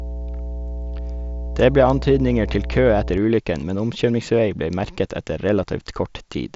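A steady low tone at 60 Hz sits under the speech from the start to 3.18 s, strong at roughly 10 dB below it. This is mains hum, power-line frequency leaking in through a ground loop or nearby transformer, far below the band-limited top that stops near 7.7 kHz.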